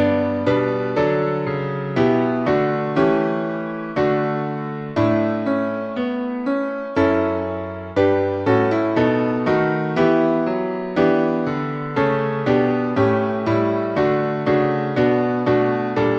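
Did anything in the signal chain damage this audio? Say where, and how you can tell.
No, nothing in the signal chain damaged this audio.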